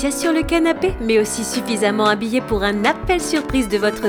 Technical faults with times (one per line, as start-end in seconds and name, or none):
2.88-4.04 train of clicks